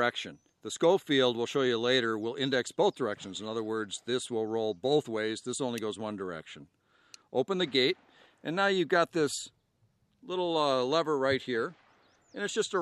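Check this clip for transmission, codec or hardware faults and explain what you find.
Nothing here stands out as a problem; the sound comes across steady and intact with no faults to report.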